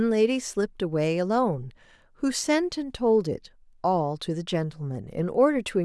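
Nothing stood out on listening to the speech here.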